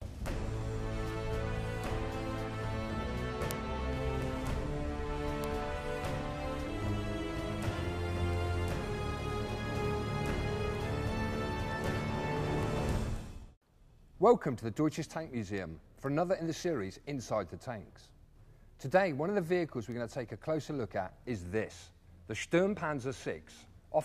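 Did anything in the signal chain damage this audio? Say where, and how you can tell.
Yes. Sharp ticks about every half second, 0.13 to 23.78 s: word clock ticks from an unlocked digital input, its clock about 40 ppm off, slipping one sample each time.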